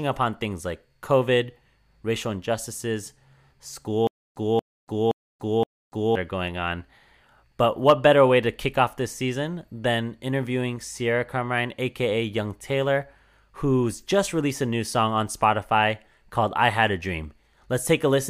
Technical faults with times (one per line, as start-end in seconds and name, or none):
4.07-6.15 stutter with silent gaps